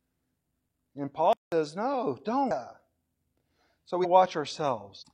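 Speech, with a silence at 1.33 to 1.52 s: the sound stops mid-flow for about 190 ms and then carries on. This is a playback stall, most likely the player running out of data or its thread being blocked. On a waveform it shows as a flat gap with speech cut off on both sides, and on a spectrogram as an empty vertical band across all frequencies. At about 2.47 s, 4.00 s and 4.97 s the audio jumps ahead with no gap: roughly 0.7 s, 0.3 s and 0.7 s of sound go missing. These are compressed frames skipped, with whole frames of about 46 ms each either absent or rejected by the decoder as damaged. The join at each point is a short disturbance. On a spectrogram the harmonic and formant patterns break off and restart in a different place within a few tens of milliseconds, and on a waveform the envelope changes abruptly at each splice.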